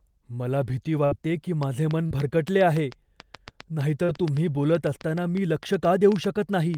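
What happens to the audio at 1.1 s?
Right after "मला भीती", from 1.05 to 1.15 s, the last sound is stretched and fades, then about 60 ms of speech is skipped: a burst of packet loss, concealed by the receiver.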